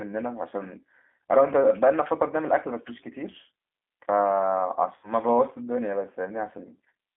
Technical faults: G.729 codec; VoIP packet loss concealed by the speech codec

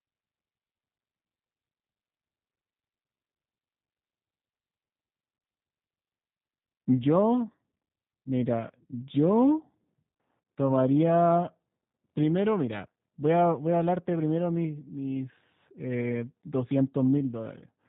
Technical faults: G.729 codec

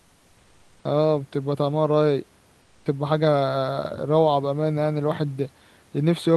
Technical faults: comfort noise in place of the background

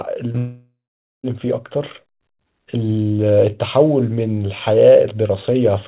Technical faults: short concealed packet loss; long network dropout

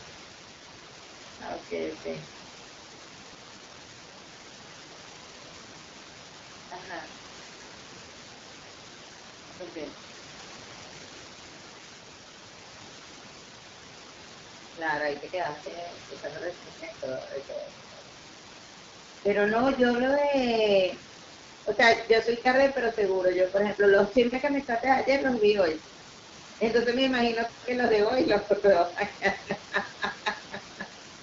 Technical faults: AMR wideband (HD Voice) codec

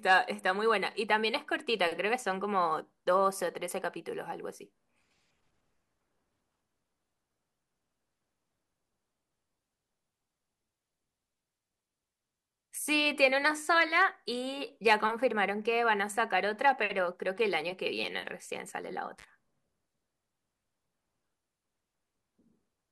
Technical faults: intermittent contact

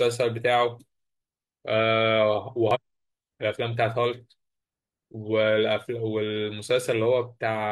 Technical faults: damaged data in a compressed stream

